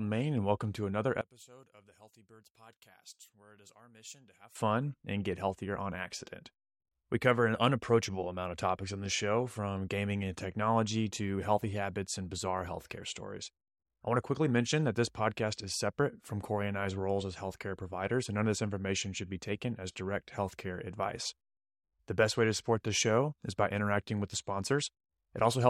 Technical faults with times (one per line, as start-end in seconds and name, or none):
1.21-4.55 one channel inverted